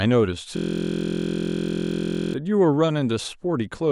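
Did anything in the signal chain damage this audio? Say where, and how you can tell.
Yes. A system hang loop at the driver or buffer stage: from 0.57 to 2.34 s the speech locks into a steady 43.1 Hz buzz as one 23.22 ms slice repeats exactly, which fits a 1024-sample buffer. The waveform shows identical cycles, and the spectrogram shows a rigid comb of 43 Hz-spaced harmonics.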